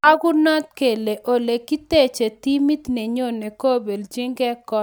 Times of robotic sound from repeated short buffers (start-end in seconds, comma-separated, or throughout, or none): none